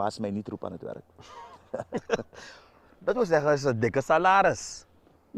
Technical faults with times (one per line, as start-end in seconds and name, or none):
none